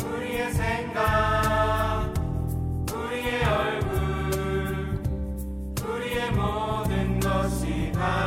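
No technical fault can be heard in this audio. There is nothing in it that calls for a time or a cause.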